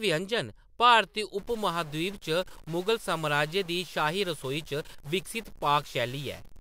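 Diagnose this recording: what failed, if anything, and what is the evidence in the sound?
From 1.39 s to the end the pauses fill with noise at about -45 dBFS. That's a stuck bit, likely in the converter or a data line. One frozen bit knocks about half the samples off by its weight.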